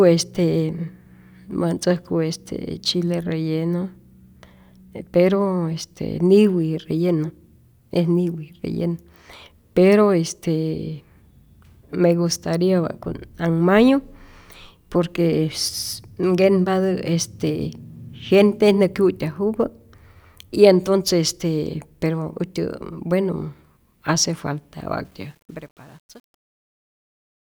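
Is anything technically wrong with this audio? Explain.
Yes. From 25.05 to 27.51 s the fade-out shows truncation distortion. The fade appears to keep about 9 bits without dither, so the tail from 25.44 s turns gritty.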